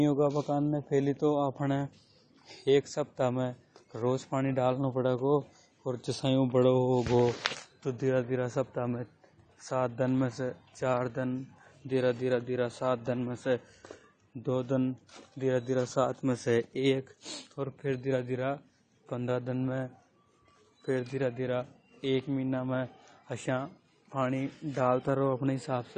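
Throughout the speech, the sound is dull and smeared, with fizzy, warbling sibilants and nothing above 9 kHz, likely from AAC compression at a low bitrate around 32 kbps. A spectrogram shows a hard ceiling at 9 kHz and patchy gaps where coarse quantisation dropped bands.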